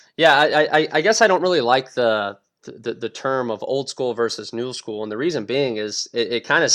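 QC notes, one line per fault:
Nothing to flag here; I can't hear any technical problems anywhere in the speech.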